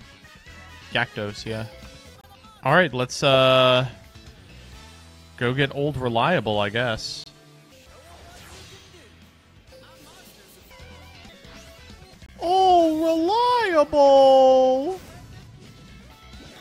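At 2.21, 7.24 and 12.26 s, a gap between chunks inserts 25 ms of silence at each 5-second chunk join, heard as short holes.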